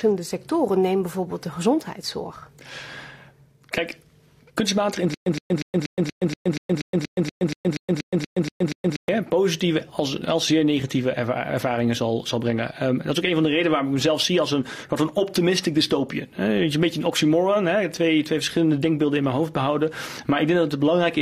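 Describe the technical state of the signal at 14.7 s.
At 14.7 s the signal is intact, with no audible technical fault at that moment.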